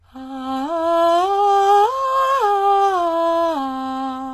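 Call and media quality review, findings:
Treble gritty and metallic across the whole music clip. Nothing above 12.3 kHz. Likely HE-AAC compression at a very low bitrate, consistent with about 16 kbps. Upper band is rebuilt by spectral band replication from copied lower bands, so harmonics misalign. Damage plainly audible.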